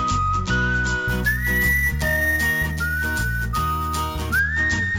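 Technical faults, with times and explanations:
1.08–4.39 s, imaging from sample-and-hold upsampling: raising 16 kHz audio to 44.1 kHz by repeating samples leaves a mirrored copy, about 16 dB down, across 8 to 16 kHz. It is heard as metallic fizz following the level. Spectrograms show an upside-down reflection above 8 kHz, and waveforms show tiny steps.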